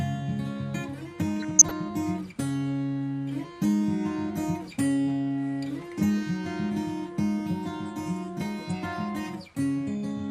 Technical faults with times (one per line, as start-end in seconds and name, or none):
1.41-1.71 DAB burbling